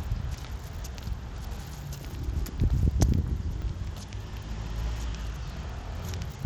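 Bluetooth SBC compression runs through the whole clip, and the sound is plainly damaged by it. The cause is likely a low SBC bit pool, fitting a Bluetooth link at around 96 kbps. The codec splits the signal into a few wide sub-bands and shares out bits with no model of hearing. The upper bands get starved and the rest are coarsely quantised, so the treble thins and flickers while a gritty, aliased haze clings to everything.

A repeated buffer occurs at 2.11 s and again at 3.62 s. Each time, fresh audio failed to reach the output in time, so the device played the last block once more. The repeated slice is very short, which fits a buffer of about 10 ms, and almost nothing is lost. It comes across as a brief click or tiny buzz from the hard joins either side of the duplicated block.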